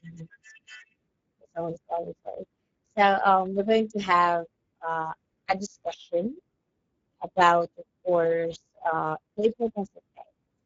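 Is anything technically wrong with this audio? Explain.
Yes. Throughout, the speech sounds hoarse and grainy with nothing above 7.7 kHz, from the Speex codec, whose damage suggests a bitrate near 10 kbps that starves the excitation signal.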